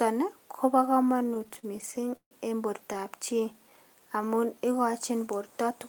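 From 1.09 to 2.33 s the speech breaks into repeated stalls (stutter): the jitter buffer kept running dry, so the receiver extended the last sound through 20 gaps, the longest 147 ms, filling about 353 ms (29% of the span) without losing anything. A spectrogram shows smeared, repeated frames, and the waveform shows fading plateaus.

From 3.33 to 4.93 s a jitter buffer slow-down repeats single pitch periods to rebuild reserve, adding 195 ms and playing at 88% speed at unchanged pitch. Sounds are drawn out. On a spectrogram, harmonics stretch horizontally and the waveform shows near-identical repeated cycles.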